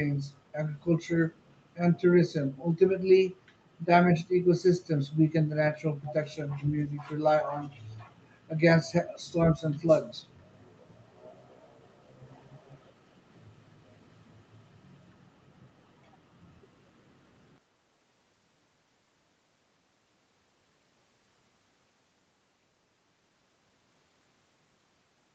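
A speech recording with an echo leak from 6.06 to 6.13 s: a brief, faint copy of the voice returns 406 ms late and roughly 15 dB quieter, likely from speakerphone audio slipping past an echo canceller. On a spectrogram it appears as a short, weak repeat of earlier harmonic patterns, within a band that stops at 8 kHz.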